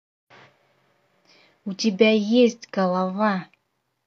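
Speech recording with no audible technical faults.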